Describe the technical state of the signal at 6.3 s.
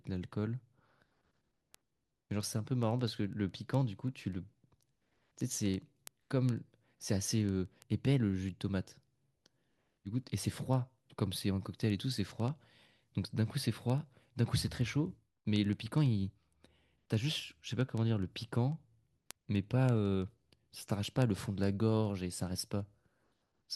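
At 6.3 s the speech carries word clock ticks, which run from 0.16 s to 23.72 s. The receiving device is not locked to the sender's clock, and an error of roughly 300 ppm drops or repeats one sample about every 70 ms, heard as sharp, uneven ticks.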